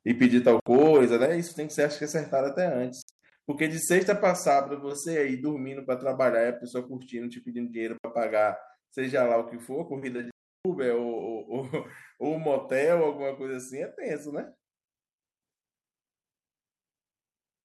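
Speech, with three kinds of fault. Microphone overload distorts the peaks from 0.21 to 1.04 s. They hit the limit by about 4 dB, likely from excessive input gain. Microphone volume stepped down suddenly four times: about 2 dB at 0.25 s, 5 dB at 1.26 s, and 2 dB at 4.32 and 13.5 s. The likely cause is software reducing a loud input. Bluetooth dropouts leave silent holes of 64 ms at 0.60 and 7.98 s and 341 ms at 10.31 s. At 3.02 to 3.32 s, several gaps total 171 ms, the longest 85 ms. Speech resumes further along, likely because packets missed the headphones.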